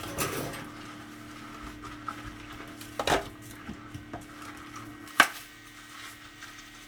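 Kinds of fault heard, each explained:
pre-emphasis left on: from 5.08 s the treble boost goes uncorrected, about 11 dB up at 10 kHz; thin, sibilant sound, with visibly brighter upper spectrogram bands.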